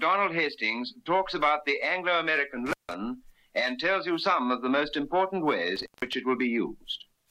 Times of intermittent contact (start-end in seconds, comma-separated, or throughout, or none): 2.66-2.94, 5.76-6.13